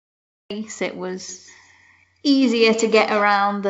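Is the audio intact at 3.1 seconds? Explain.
No. From 1.29 to 3.37 s there is feedback echo between two devices: a second device's playback is picked up and sent back, so the sound returns at a fixed gap of roughly 150 ms, at about -12 dB, unlike reverb's smooth, diffuse tail.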